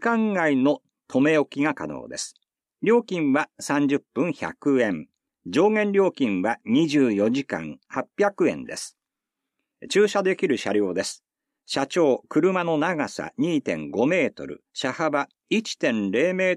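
No faults detected anywhere in the audio.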